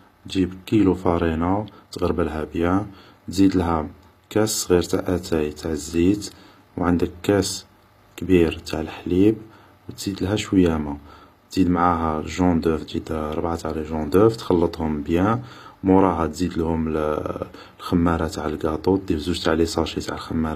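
Speech, with HE-AAC compression damage plainly audible from start to finish. The top octave is present, with content running up to a hard ceiling near 14.9 kHz, yet it sounds synthetic: s sounds come out gritty and metallic. That points to treble rebuilt by copying lower bands upward, likely from HE-AAC at a low rate, which fits roughly 24 kbps. Ordinary low-bitrate AAC or MP3 would simply sound dull or swirly instead.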